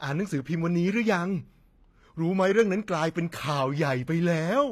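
HE-AAC compression, present throughout: the speech carries plainly audible coding damage, and nothing sounds above about 14.9 kHz. The treble still reaches high, but the s sounds come out gritty and metallic, with upper harmonics that fail to line up with the body of the voice below. That points to spectral band replication, likely the result of the codec rebuilding the top octaves from copied lower bands at a low bitrate, something near 24 kbps.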